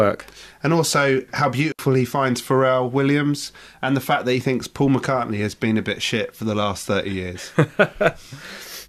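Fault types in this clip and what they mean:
Intermittent contact: A loose cable or plug briefly loses its connection. The speech drops out for about 68 ms, from 1.72 to 1.79 s, between "also how" and "he finds". Crackle marks both edges of the gap, and faint hiss remains while the line is open.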